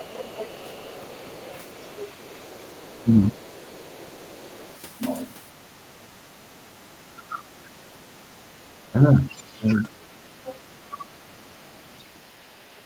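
From the start to 4.77 s, a second voice sits faintly under the talker, roughly 25 dB down. This is the other side's voice leaking through, likely because the far end plays on a loudspeaker and the echo canceller left some of it in the microphone signal. Unlike the ducking described next, the fault is an extra, separate voice added to the mix.

Between 0.37 and 4.63 s the talker's own voice dips in patches totalling around a second and a half, falling by roughly 15 dB at worst. This is speech suppressed in double talk: with both sides talking at once, the canceller likely could not separate the talker from the echo and turned everything down. The difference from leakage is that something is missing rather than added: the near voice sags, dulls or drops out in pieces.

From 5.65 to 9.67 s the same suppression returns more strongly. Dips add up to about two seconds and go as deep as roughly 20 dB.

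From 7.35 s to the end, the leaking far-end voice is back, now very faint at around 35 dB below the talker.

Two brief ducks follow, at 10.89–11.07 s (roughly 15 dB) and 12.76–12.81 s (roughly 10 dB). Each sounds like a momentary hole in the talker's voice.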